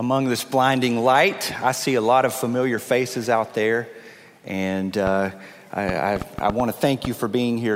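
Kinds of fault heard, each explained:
Train of clicks: From 5.07 to 7.06 s, short pops of much the same shape tick over the sound at an uneven pace. There are about seven, roughly 3.5 per second, peaking around 10 dB above the signal. The likely cause is interference or a faulty connection or power supply.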